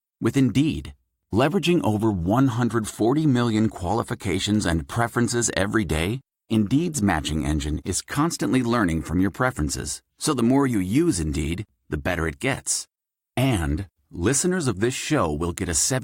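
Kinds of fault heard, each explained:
Nothing stood out as a fault on listening.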